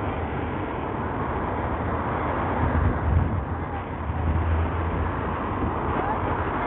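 From start to finish the treble flickers and drops out under gritty, aliased grain, heavy damage that points to likely Bluetooth SBC compression running at a starved bitrate, around 48 kbps.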